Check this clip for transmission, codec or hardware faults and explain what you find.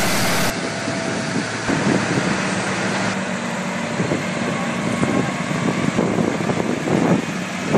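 One fault is audible, at the very start. From 0.0 to 0.5 s the sound turns harsh and buzzy, with a loud noise floor that doesn't fall away in quieter moments. The likely cause is a stuck bit: one fairly high data bit held fixed, shifting about half the samples by a large step and filling near-silent stretches with noise.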